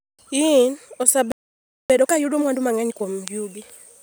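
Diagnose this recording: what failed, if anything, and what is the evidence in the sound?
A playback stall cuts the speech off mid-flow at 1.32 s, and the output stays silent until 1.90 s, a gap of about 0.58 s. This sits at the playback stage, in the player's buffering. The output is not muted or fading. It simply stops delivering samples, which is the signature of a buffer running dry. The likely cause is an underrun, with the player starved of data or its audio thread blocked for over half a second.

Time-compressed catch-up follows immediately, from 1.90 to 3.06 s. The speech runs at 1.5 times normal speed but keeps its natural pitch, so it sounds rushed rather than chipmunk-like. Short segments are dropped and the remaining pieces are cross-faded together. The player is working off the backlog it built up during the stall, and once the buffer is back at its target depth, normal pacing resumes after 3.06 s.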